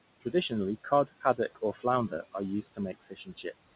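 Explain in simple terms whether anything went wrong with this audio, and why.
Two things went wrong, both caused by the noise suppressor.

First, noise suppressor artifacts run through the whole clip. The suppressor pushes the room noise down hard between words. The noise then creeps back under the voice.

Second, there are three patches of speech cut by the noise suppressor: 0.84 to 1.39 s, 1.73 to 1.85 s, and 2.62 to 3.74 s. Here the suppressor mistook parts of the voice for noise and turned them down. Quiet sounds and word endings come out faint or swallowed. The last stretch is the worst, with about half a second of speech dulled.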